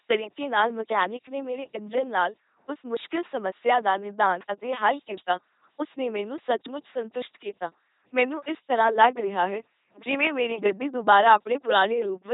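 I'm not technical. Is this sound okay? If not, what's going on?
No. An LPC-10 vocoder runs through the whole speech clip, giving a buzzing, robotic voice. It rebuilds each moment from a simple buzz or hiss passed through a rough model of the mouth, so natural tone is lost and nothing remains above 3.8 kHz.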